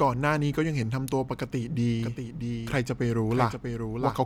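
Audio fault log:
2.0–4.3 s, doubled audio track: a full-band second copy of the speech trails about 700 ms behind, roughly 5 dB quieter, starting abruptly and carrying no decay or room colour, unlike an echo. A slower second capture path is the likely cause.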